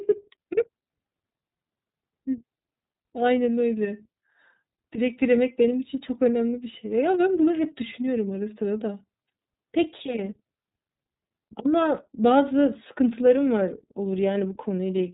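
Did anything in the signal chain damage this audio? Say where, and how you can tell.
Yes, the codec stage damaged the whole clip with iLBC coding. The speech is band-limited and slightly rough and synthetic throughout, which fits the 13.33 kbps mode with 30 ms frames. A spectrogram shows a hard ceiling near 4 kHz, with excitation rebuilt frame by frame.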